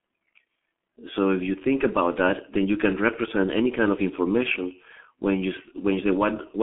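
G.723.1 codec damage runs through the whole of this speech recording, with nothing above 3.7 kHz and a telephone-style band of about 150 Hz to 3.4 kHz. The codec rebuilds speech from a coarse vocal model updated only once per 30 ms frame, at a rate that fits roughly 6 kbit/s, so the heavy damage leaves the voice muffled and hoarse, with smeared consonants. Faint room noise sits about 51 dB below the speech.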